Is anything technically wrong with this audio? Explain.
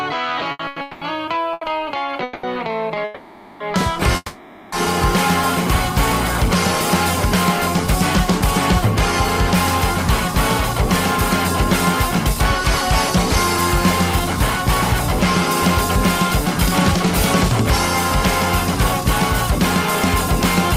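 Yes. Between 0.51 and 2.44 s the audio shows repeated stalls (stutter). Five gaps, the longest 200 ms, are filled with continuations of the preceding sound, 650 ms in all and about a third of that span. Packets reached the jitter buffer more slowly than playback consumed them, so it kept running dry. Nothing is lost, but the sound drags and hiccups. On a spectrogram the gaps appear as short, horizontally smeared repeats of the previous frame.

There are two call audio freezes, from 3.04 to 3.61 s and from 4.16 to 4.73 s. Each is a 560 ms stretch where the last sound carries on as a fading buzz before the audio resumes where it stopped. The second one drops briefly to silence just before recovery. The likely cause is packets held up in transit, which emptied the buffer. The waveform shows a decaying envelope, and the spectrogram shows frozen, fading bands.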